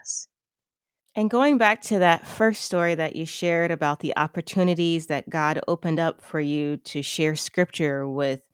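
No audible technical faults.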